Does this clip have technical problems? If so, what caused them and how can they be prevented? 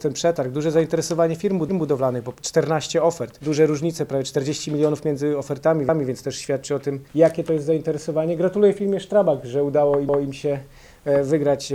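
Yes, there are overlapping chunks. At 1.69–1.89 s, 5.89–6.09 s and 10.09–10.29 s, a 200 ms slice of audio plays twice, which gives a little stutter at each join. The regular spacing points to the audio being handled in 4-second chunks, with each new chunk starting 200 ms before the previous one finished. To prevent it, make sure chunk boundaries line up exactly, or trim or crossfade any overlap when the pieces are stitched back together.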